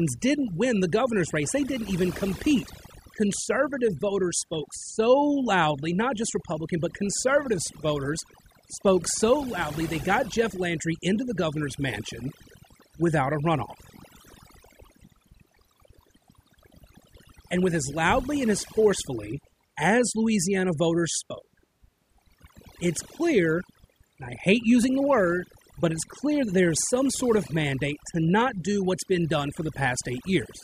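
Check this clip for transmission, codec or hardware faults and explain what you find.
One fault runs through the whole recording: overdone noise removal. A noise reduction stage was driven far too hard, so any frequency band that comes close to its noise estimate gets pushed right down or switched off. Quieter parts of the speech fall under that threshold and are stripped out along with the noise. The result is a background of near silence dotted with twinkling specks.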